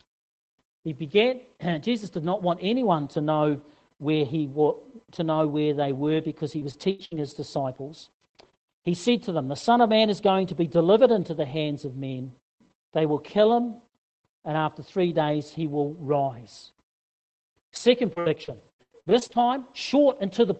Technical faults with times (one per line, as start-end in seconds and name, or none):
6.59-7.58 repeated packet loss (robotic sound)
18.14-19.52 repeated packet loss (robotic sound)